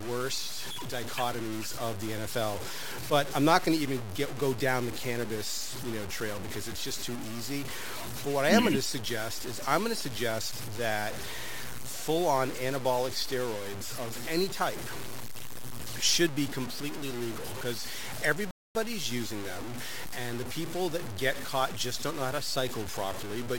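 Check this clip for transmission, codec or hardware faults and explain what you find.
Two faults are present: grainy distortion through the whole speech clip, and one rebuffering stall near the end.

Low bit depth without dither runs throughout. The speech is gritty, with error only about 10 dB below the signal, which fits 5-bit truncation without dither as the likely cause. Unlike steady hiss, the grit rises and falls with the speech.

A rebuffering stall occurs from 18.51 to 18.75 s, just before "using them and the". The player ran out of buffered audio, so the sound stops for about 0.24 s and then resumes exactly where it halted. Unlike a dropout, nothing is missing; only time is added.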